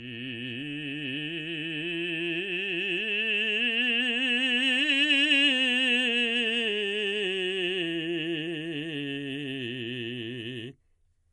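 It's a music clip with audible MP3 compression throughout, likely a low-bitrate encode around 48 kbps: nothing above 11.3 kHz, with watery, swirling artefacts where sparse frequency lines flicker.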